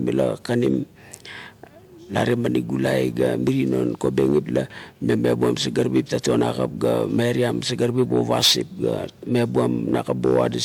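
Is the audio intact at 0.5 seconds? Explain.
Yes, the speech at 0.5 seconds plays through intact, with no dropout, click, distortion or other fault at that moment.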